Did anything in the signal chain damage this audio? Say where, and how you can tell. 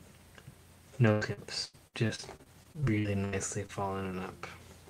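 Yes, at the network stage: repeated packet loss (robotic sound) from 1.11 s to 3.71 s. Sixteen gaps, the longest 99 ms, are patched by stretching the previous sound, concealing about a quarter of that stretch. A spectrogram shows smeared, repeated frames broken by sharp-edged dropouts.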